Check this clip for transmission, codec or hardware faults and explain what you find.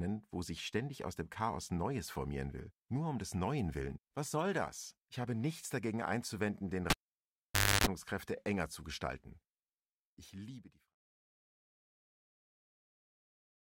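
One hardware fault is present in this speech recording: a cable pulled and plugged in between 6.90 and 7.87 s. The live lead came out, leaving the signal near silent for about 0.91 s, including about 0.29 s of buzz as only the plug tip made contact, carrying 50 Hz mains hum. It sounds like a pop, a dropout, a harsh buzz, then a second pop as the audio returns. On a waveform, sharp spikes bracket a flat gap. A spectrogram shows broadband vertical lines at each pop, with stacked horizontal harmonics at 50 Hz multiples during the buzz. The gradual fade-out that ends at 10.97 s is smooth and separate from this fault.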